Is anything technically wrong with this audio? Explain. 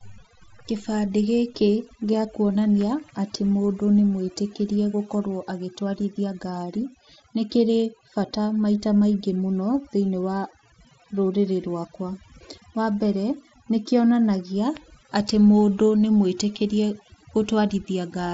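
Yes. Overdone noise removal affects the whole speech clip, from start to finish. A noise reduction stage was set too aggressively. It cuts individual frequency bands hard whenever their level comes close to its estimate of the noise floor, so low-level parts of the speech are removed along with the noise. The background drops and breaks up into twinkling specks. The band limit near 7.7 kHz fits the Bluetooth mSBC headset codec the audio passed through, and that path contributes only light grain.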